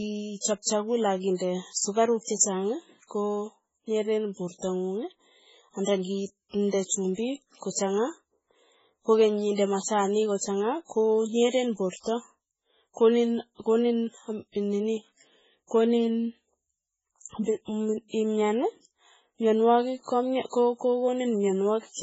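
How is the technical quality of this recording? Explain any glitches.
The technical quality is poor. Throughout the speech, nothing is heard above 7.7 kHz, and the sound is watery and swirly with smeared consonants. This is likely heavy MP3 compression, which fits a very low bitrate near 16 kbps. Starved of bits, the encoder drops the treble and lets weak frequency lines flicker between frames.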